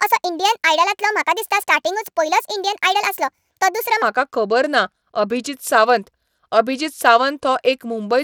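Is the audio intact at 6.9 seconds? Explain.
No, at 6.9 seconds the speech carries plainly audible Bluetooth SBC compression, present throughout the clip. The coarse sub-band quantisation, consistent with a low bitrate around 96 kbps, likely leaves the upper bands starved, so treble flickers and a gritty, aliased edge rides on the sound.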